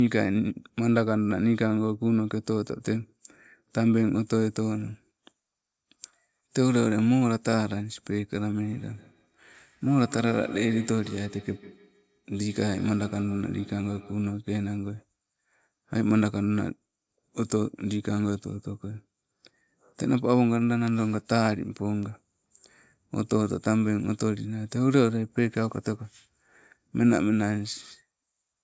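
Feedback echo between two devices runs from 8.61 to 14.46 s in this speech recording, with the sound returning at a fixed interval of roughly 150 ms, its loudest repeat about 18 dB below the speech. Two devices on the same call share a room: one plays back what the other's microphone sent, that microphone hears it again, and neither echo canceller removes sound from the other device, so the loop keeps sending the speech round.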